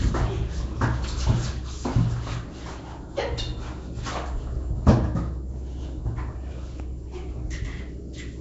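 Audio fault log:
Throughout: rough, hissy, smeared sound with nothing above 7.7 kHz, likely Nellymoser compression near 32 kbps, which starves weak bands and fills them with noise.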